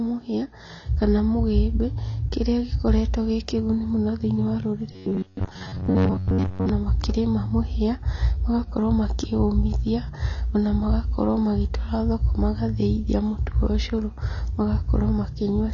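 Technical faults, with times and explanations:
Throughout: AAC compression. Nothing survives above about 7.1 kHz, leaving the speech dull, with smeared, warbly sibilants. The damage is plainly audible and likely comes from AAC-LC at a low bitrate, around 24 kbps. A plain low-pass filter would leave no such fizz below the cut-off.
4.92 to 6.69 s: robotic sound from repeated short buffers. Between "kĩguni mũno thĩinĩ wa" and "makĩrĩma mũhia magakorwo makĩ", most of the stretch becomes a rigid metallic buzz near 94 Hz. That pitch likely comes from one roughly 10.7 ms chunk looping while real audio is skipped, unlike dropout gaps or silence.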